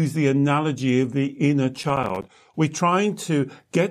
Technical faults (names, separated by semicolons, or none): processor overload crackle